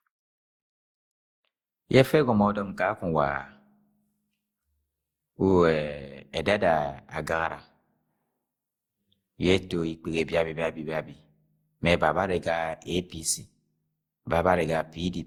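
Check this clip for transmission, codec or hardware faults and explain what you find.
One codec fault runs through the whole speech clip. Generation loss: the audio was likely decoded and re-encoded with Opus around seven times, fitting a 64 kbit/s chain, each pass requantising on a shifted frame grid. Noise and spectral holes pile up, so speech sounds swirly, smeared and hollow, with blurred attacks.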